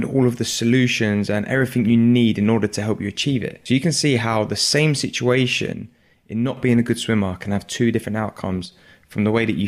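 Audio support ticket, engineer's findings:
One channel drops out, likely a lost stereo leg before the mono sum. Speech falls abruptly by about 6 dB at 5.73–6.57 s, before "being a good swimmer", and at 8.66–8.72 s, after "can have two different".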